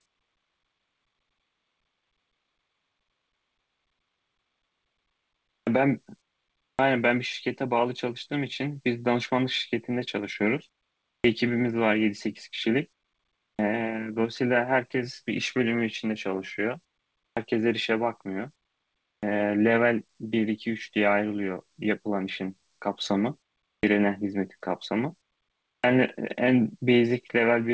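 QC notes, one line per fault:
5.63, 6.75, 11.2, 13.55, 17.33, 19.19, 23.79, 25.8 s: clipped start after a pause. The idle output device wakes late, cutting 37 to 43 ms from each onset, so speech starts abruptly.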